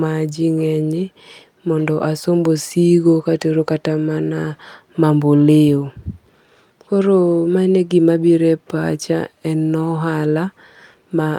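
Speech with no audible faults.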